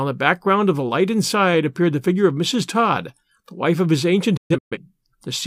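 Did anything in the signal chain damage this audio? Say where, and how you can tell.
Yes. Just after "the wife of his", from 4.37 to 4.77 s, the speech breaks into several short holes rather than one gap. About 256 ms of audio is missing across roughly 340 ms, the longest hole lasting 128 ms, and each cut begins with a quick 8 ms fade. This is a digital broadcast dropout at the reception and decoding stage. The receiver muted whenever frames arrived corrupted or failed to arrive, and the pattern fits about six lost frames.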